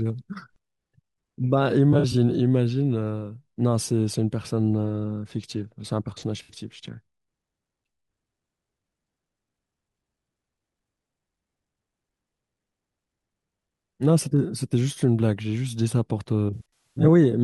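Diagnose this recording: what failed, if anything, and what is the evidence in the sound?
AAC frame loss with concealment in the codec: phasey smears at 1.92 s, 6.43 s and 16.54 to 17.08 s, where the decoder patched gaps from the last good spectrum.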